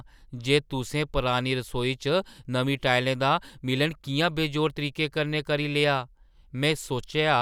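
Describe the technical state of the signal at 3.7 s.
At 3.7 s the speech signal is intact, with no audible technical fault at that moment.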